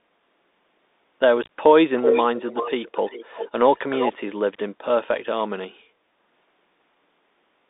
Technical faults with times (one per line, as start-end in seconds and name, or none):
0.00-7.70 Bluetooth CVSD headset codec
1.43-1.49 unconcealed Bluetooth headset packet loss
1.97-3.50 echo leak
3.76-4.13 echo leak